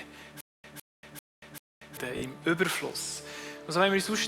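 From 0.41 to 1.97 s, a stutter with silent gaps: a 158 ms burst repeats four times, separated by 234 ms of digital silence, likely a stalled stream replaying its last fragment. From 2.17 to 2.22 s, repeated frames: one 20 ms block plays twice more, adding 40 ms and producing a brief stutter.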